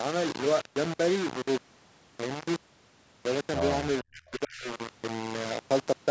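From start to finish the speech carries a coarse, gritty distortion that rises and falls with the voice, likely low bit depth without dither: the samples seem rounded to about 4 bits, leaving an error only around 10 dB below the signal. Unlike broadband hiss, this grain follows the speech itself, roughening quiet syllables and vanishing in pauses rather than sitting as a steady noise floor.

Between 4.02 and 4.7 s the speech is pushed down, by as much as about 35 dB, for roughly half a second in total. This points to speech suppressed in double talk, where an echo canceller cannot separate the near talker from simultaneous far-end loudspeaker echo and attenuates the near talker. What separates it from a network dropout is that the voice is turned down by the echo canceller rather than the signal itself being lost.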